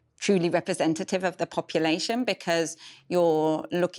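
Right after "truly representative of the", at about 1.75 s, a resampler restarted on every block kicks in and runs to the end of the clip. Each 50 ms chunk gets converted on its own during a 24 kHz to 48 kHz upsample, so every chunk edge picks up a small error where the converter never saw its neighbours. You hear it as a steady 20 Hz ticking, almost a rough buzz, riding along under the speech.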